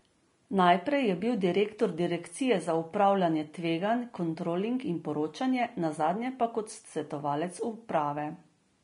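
From start to finish, the speech carries a smeared, watery quality, with a dulled top end and that swirly texture low-rate codecs leave on consonants. It's very likely low-bitrate audio saved at a high bitrate: the damage fits an earlier pass at around 33 kbit/s, something like Vorbis, later re-encoded as a roomy MP3 at 256 kbit/s. The second encode keeps that damage intact, so the larger file sounds no better than the cramped original did.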